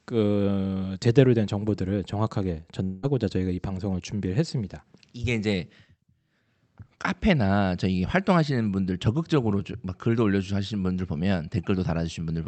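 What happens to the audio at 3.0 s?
From 2.83 to 3.05 s, likely a long network dropout: the receiver stretches the last sound into a fading buzz, seen as decaying spectrogram bands.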